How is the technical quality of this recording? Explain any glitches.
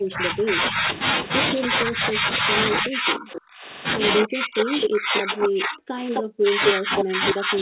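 Poor, because of call echo-control problems throughout.

Speech suppressed in double talk: at 0–0.88 s, 1.66–2.5 s, 2.81–3.67 s and 4.19 s to the end, the level dips, likely from the echo canceller ducking during overlap. Waveform troughs fall by up to about 40 dB.

Echo leak: at 3.32–3.41 s, 4.84–4.89 s, 6.14–6.23 s and 6.66 s to the end, a 260 ms delayed copy appears, from about 15 dB down to equal level. It is likely uncancelled loudspeaker pickup, and it shows as a shifted repeat of the spectrogram pattern.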